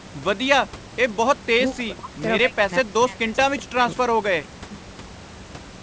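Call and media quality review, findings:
Speech dips out in chunks, 1.72–2.17 s and 2.41–4.7 s, dropping by roughly 35–40 dB: likely speech suppressed in double talk, the echo canceller ducking near-end speech while far end talks.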